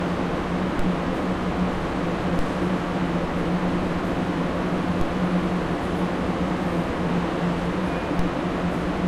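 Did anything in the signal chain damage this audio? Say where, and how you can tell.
Yes. Converter-stage DC steps at 0.79, 2.39, 5.01 and 8.19 s: the zero line jumps about 14 dB below full scale, thumps, then decays through a 5 Hz high-pass.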